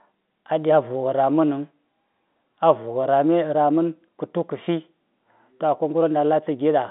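Nothing goes wrong here; the speech simply comes down an ordinary G.711 mu-law telephone line at 64 kbps, so it sits in the familiar narrow phone band from 200 Hz to 3.6 kHz with nothing above 3.8 kHz, which is just how a regular call sounds.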